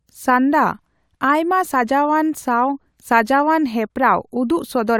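Listening through the speech recording, nothing stood out as a technical fault at any point.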